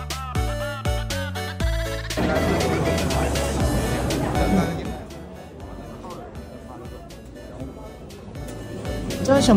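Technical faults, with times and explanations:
8.2–9.44 s zipper noise: the level shifts about 15 dB in unsmoothed 1 dB steps, around thirty a second, each jump clicking into a rapid zipping.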